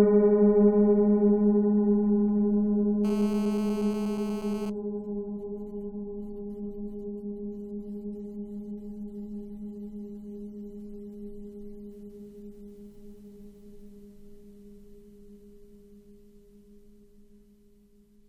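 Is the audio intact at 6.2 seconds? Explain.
Yes, the audio is intact at 6.2 seconds, with no dropout, click, distortion or other fault at that moment.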